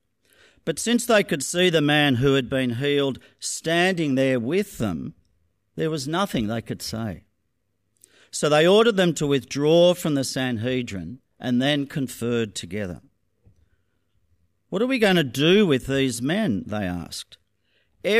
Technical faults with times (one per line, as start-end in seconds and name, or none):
none